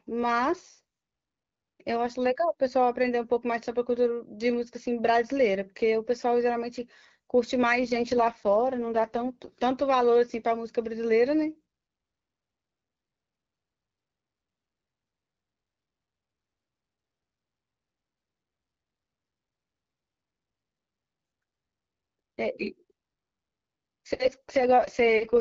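AMR rate drop at 7.82 to 9.50 s and 24.25 to 25.37 s: the speech turns rough and synthetic without gaps, which points to the wideband codec stepping down from 12.65 to 6.6 kbit/s.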